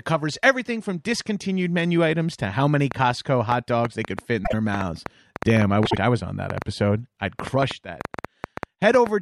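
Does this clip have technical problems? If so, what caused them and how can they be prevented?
Yes. From 2.92 s to 9.08 s a train of clicks runs over the speech, roughly 30 sharp, similar-shaped pulses arriving at an uneven pace averaging 5.2 per second and peaking around 15 dB above the signal, audible in the pauses as well. This is likely interference from nearby electrical equipment or a faulty connection or power supply coupling pulses into the path. Prevention: shield and reroute cables, separate the interface from noisy equipment, and check grounding and drivers.

Frames out of order appear twice, at 4.44 to 4.54 s and at 5.85 to 5.97 s. In each, two adjacent blocks of decoded audio were exchanged, 26.1 ms blocks in the first case and 52.2 ms blocks in the second, which fits one and then two codec frames being swapped. The stretch plays back garbled, with a brief flutter, but no time is lost. 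Prevention: use a transport that reorders packets by sequence number before decoding.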